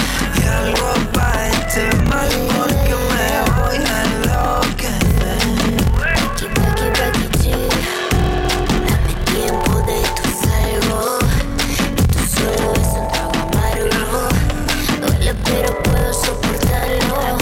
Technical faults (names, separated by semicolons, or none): block size mismatch (padded)